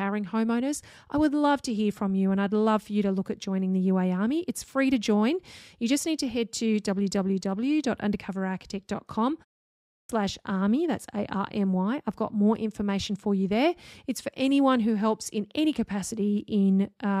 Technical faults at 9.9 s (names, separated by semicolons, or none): clipped start after a pause